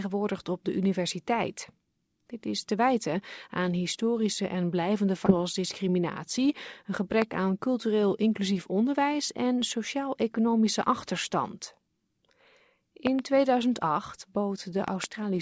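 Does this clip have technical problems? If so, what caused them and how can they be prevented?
Yes. At 5.26 to 5.37 s there is a skip ahead: about 0.7 s of audio is gone and the two sides are joined almost directly, with no filled gap. Unlike a dropout, nothing goes silent; the sound simply jumps forward. A larger jitter buffer with smoother network delivery would prevent it.

From 5.84 to 6.46 s a jitter buffer speed-up runs the audio at 105% to shed backed-up delay, cutting a few tens of milliseconds in small pitch-period slices. The pitch stays the same, which sets it apart from a resampling error. Steadier packet arrival avoids the buildup.

A loud pop lands at 7.22 to 7.24 s, and double pops follow at 13.07 to 13.21 s and 14.88 to 15.06 s. Each peaks about 15 dB above the signal while the sound carries on underneath. The likely cause is an electrical transient from a plug, a switch or static. 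Unlike a dropout click, nothing is lost. Secure connectors and grounding prevent them.

The G.722 call path leaves nothing above 8 kHz.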